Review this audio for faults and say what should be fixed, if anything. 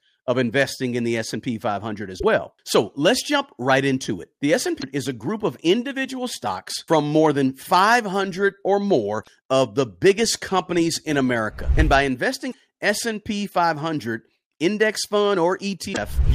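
Damaged data in a compressed stream at 2.16–2.24, 4.77–4.84, 9.21–9.28, 12.48–12.55 and 15.90–15.98 s: corrupted frames make the decoder lose sync, producing brief chirps, squawks, clicks or short holes. Fix it by re-sourcing the file or transferring it with checksum verification.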